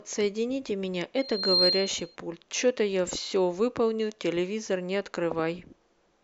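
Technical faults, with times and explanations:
1.18–2.16 s, loudspeaker feedback squeal: the microphone picked up its own loudspeaker, and at 4.2 kHz the loop gain exceeded one, so that tone fed on itself, swelling over roughly 0.4 s into a piercing whistle a few decibels above the speech.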